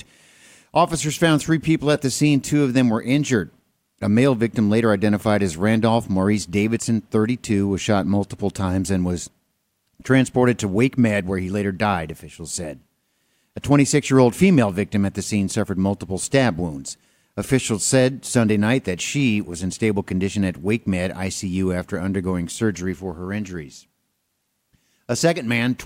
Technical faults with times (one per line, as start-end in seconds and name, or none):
none